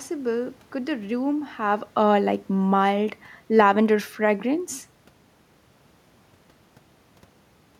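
From 1.99 s to 4.73 s, automatic gain falling lowers the level by about 3 dB. Speech and room noise sink together, so the waveform envelope and the spectrogram's noise floor both taper gradually across that span.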